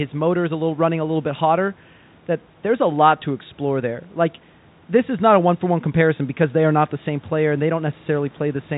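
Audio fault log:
The speech is carried in G.711 telephone coding, with nothing audible above 3.8 kHz and room noise sitting about 33 dB below the speech, and no fault can be heard.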